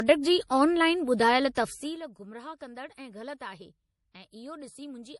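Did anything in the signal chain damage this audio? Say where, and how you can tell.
Yes, at the codec stage. Throughout the speech there's nothing above 11.5 kHz, a hard ceiling typical of a low-rate MP3 pass. It's likely low-bitrate audio saved at a high bitrate: the generous second encode can't restore what the first discarded.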